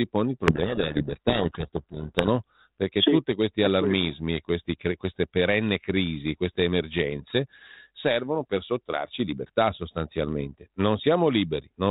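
From 0.47 to 2.29 s there's a codec payload misread: the G.726 code words are being unpacked in the wrong bit order, so the decoder builds the wrong prediction steps and the speech disappears under harsh, grinding distortion until it snaps back to the light, band-limited 32 kbit/s G.726 sound.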